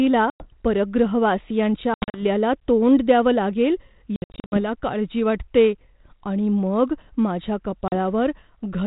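Packet loss on an ADPCM call hits at 0.3, 1.94 to 2.22, 4.16 to 4.59 and 7.88 s: hard silent holes, then slightly distorted speech while the predictor resyncs.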